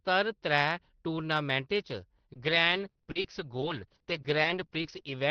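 Speech that turns choppy and robotic from 2.33 s to 5.12 s, with short pieces dropping out and the preceding sound stretched to fill them. This is repeated packet loss: audio packets went missing or arrived late about 17 times across that stretch, with gaps up to 60 ms. Each hole was covered by extending the preceding sound, around 410 ms of patching in all, about 15% of the span. The gaps come back too soon for the audio to recover. The call path, which sounds like Opus at roughly 20 kbps, tops out near 6 kHz.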